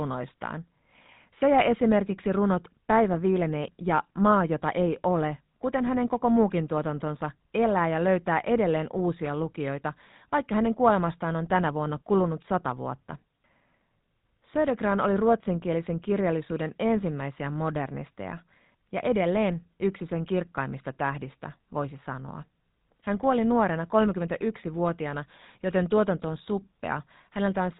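From start to finish, the speech runs through a GSM full-rate codec. The damage is plainly audible. Nothing passes above 3.8 kHz, so the top end is dull. Pulse-driven excitation makes the voice buzzy and gravelly. The coarseness fits 13 kbit/s.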